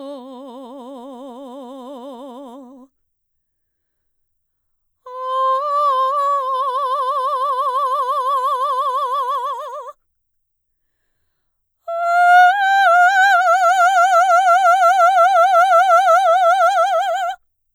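Listening to the music turned up nothing that stood out as a technical problem.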